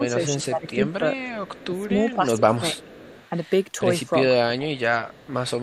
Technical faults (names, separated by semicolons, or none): speech suppressed in double talk; echo leak